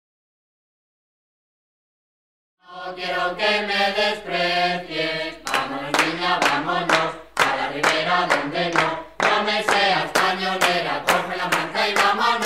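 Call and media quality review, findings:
No faults found in this audio. A smooth fade-in rises from roughly 2.5 s to full level at 3.36 s, with no click or hard edge.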